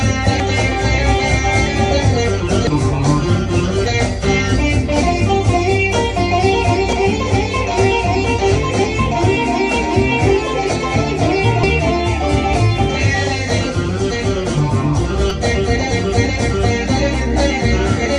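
The audio carries damaged data in a compressed stream, heard as brief chirps or blips at 0.40, 2.67, 6.93, 11.63 and 15.30 s. At each point corrupted bytes make the decoder misread frames, lose sync and resume at the next valid frame header.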